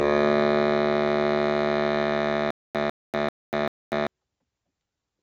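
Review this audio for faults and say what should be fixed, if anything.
A noise suppressor applied to music was left on for the whole clip. It treats held tones and decay tails as noise, so sustained parts dip by around 5 dB while attacks pass, making the music pump and thin. Bypass speech noise suppression whenever music is being sent.

A stutter with silent gaps runs from 2.51 to 4.07 s, likely from a stalled player or stream retrying. A 149 ms fragment repeats four times, each followed by 242 ms of digital silence, a 391 ms cycle, and the intended audio in that span is lost. Give the playback path enough buffering and a clean recovery so a stall never replays the last fragment.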